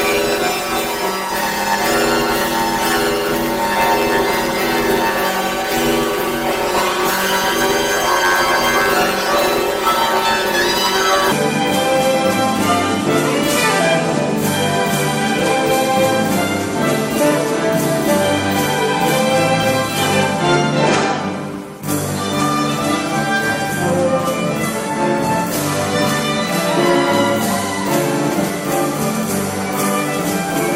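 From the start to about 11.32 s you're hearing planar audio read as interleaved. Each block of sound stored all of one channel and then all of the other, but it got read as alternating pairs. So every block plays twice at double speed, once per channel, and the pace still comes out right. The blocks here are short, around 10.67 ms, which fits a 512-sample block. That gives a robotic buzz at roughly 93.8 Hz instead of any clear octave jump.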